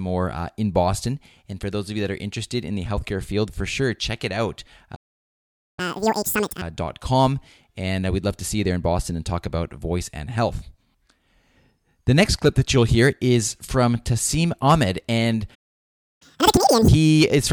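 A playback stall at 4.95 s, just after "sure check it out", cuts the speech to silence for 0.82 s, likely because the player ran short of buffered data. Catch-up at higher speed follows from 5.79 to 6.62 s: the player resamples the backlog at double speed, so the speech races and rises by nearly ten semitones before dropping back. The pattern repeats. A second stall silences the audio from 15.54 to 16.22 s, for 0.66 s, likely from the same data shortfall. Double-speed, raised-pitch catch-up then runs until 16.88 s.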